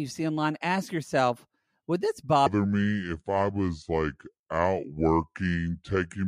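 It's a short speech recording, and from 2.46 s through to the end there's a section at the wrong speed. It runs at 0.679 times the rate it should, so the voice sinks roughly seven semitones and slows right down. It was likely played or resampled against a mismatched clock.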